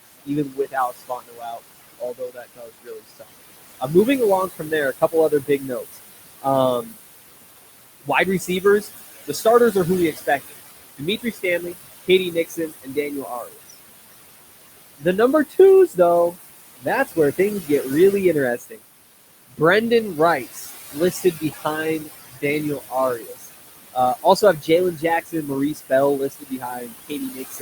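Throughout the clip, the room noise, which sits about 11 dB below the speech, drops away in pauses and swells back under speech. These are noise suppressor artifacts. The suppressor cuts what it takes for steady noise by about 19 dB, band by band, frame by frame.

Parts of the speech sound swallowed or faint at 0.07–3.89 s, 4.48–6.94 s, 8.04–13.75 s, 14.98–17.84 s, 18.57–18.8 s and from 20.14 s to the end. This is speech cut by the noise suppressor, which mistakes quiet speech for noise and pulls it down by about 22, 21, 20, 19, 16 and 20 dB respectively. Within those spans the lost speech adds up to roughly two seconds, under a second, about a second and a half, half a second and a fifth of a second.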